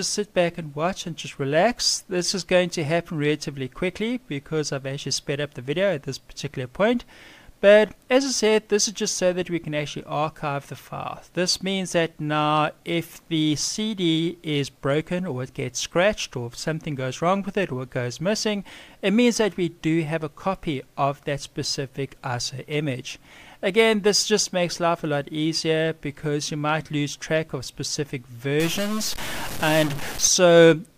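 Stuck bit from 28.6 to 30.27 s: harsh, buzzy distortion, likely one bit held fixed, offsetting about half the samples by a step near -25 dBFS.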